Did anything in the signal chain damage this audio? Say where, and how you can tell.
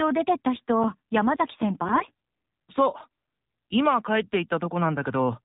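Yes. The speech sounds buzzy and synthetic throughout, with nothing above 4 kHz. That is the AMR narrowband mobile codec at the codec stage, and the plainly audible damage points to a low bitrate around 7.4 kbps.

Eight short ticks or micro-dropouts, each around 10 ms at most, recur between 0.57 and 2.41 s. These are CD scratch ticks from the storage and playback stage, where the player patched over unrecoverable data once per disc revolution.

From 1.84 to 2.04 s and 3.50 to 3.62 s, the speech keeps its pitch and level but turns hoarse and gargly. These are AMR bit errors on the network link: a few percent of unprotected bits were flipped, so the decoder misplaced its excitation pulses.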